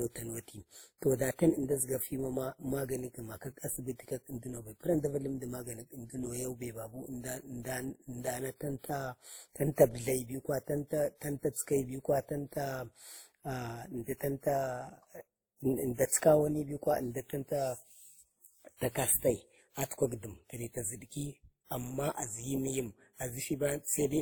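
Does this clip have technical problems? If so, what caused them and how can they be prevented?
Yes, there's transcoding between lossy codecs throughout. It sounds like a low-rate Opus encode, likely re-encoded to WMA, so both codecs' artefacts stack up, with nothing above 20.1 kHz. To prevent it, encode once from the original source instead of converting one lossy file into another.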